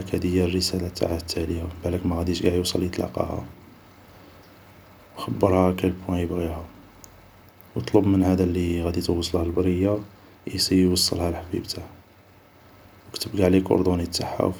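Nothing in this recording of speech stands out as a technical fault, so there's nothing to walk through here.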